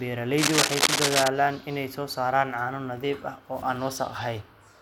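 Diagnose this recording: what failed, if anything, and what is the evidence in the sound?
Cable scratch noise from 0.37 to 1.28 s: dense, uneven scratching rides over the speech, somewhat louder than it. The likely cause is a worn cable or connector in the analogue wiring being moved, its contact resistance flickering. A spectrogram shows ragged broadband bursts; the waveform shows jagged spikes.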